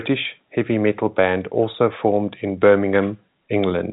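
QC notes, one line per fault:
Nothing stood out on listening to this telephone-band speech recording.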